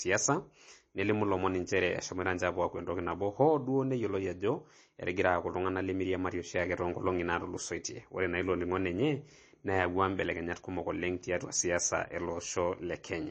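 Speech runs throughout with plainly audible MP3 compression damage. Nothing reaches above 8.3 kHz, so the treble is cut flat. Weak detail swirls and turns watery, and s sounds chirp metallically. The likely cause is heavy MP3 encoding, which fits a bitrate near 32 kbps.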